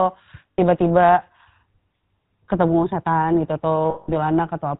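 Throughout, the sound carries the GSM full-rate codec's plainly audible buzzy, gravelly roughness, which fits a 13 kbps stream, and nothing passes above 4 kHz. A plain band limit would only muffle; here the vocal-tract model and sparse pulse excitation add that grit.

At 0.52 to 0.59 s (60 ms) and 3.90 to 4.11 s (180 ms), lost GSM frames leave a rough, metallic ring as the last good frame's settings are repeated. Unlike a dropout, the gaps do not fall silent; the held ring fills them instead.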